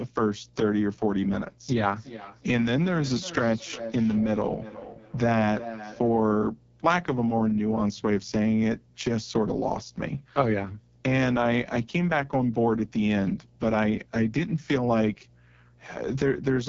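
Right from the start there's mains hum, a steady 60 Hz tone sitting roughly 30 dB under the speech. That's the power line leaking into the signal, most likely through a ground loop or a transformer near the gear, and it never lets up.

The whole clip also carries the AMR wideband (HD Voice) codec at its worst. The speech comes out rough and raspy, with heavy codec damage that fits the lowest AMR-WB rate, around 6.6 kbit/s, and nothing at all above 7.5 kHz.

From 1.86 to 6.32 s you get feedback echo between two devices. Two devices on the same call are sharing a room, so one mic hears the other's speaker, and the speech comes back around every 0.4 s, thinner and ringier, peaking about 13 dB below the speech.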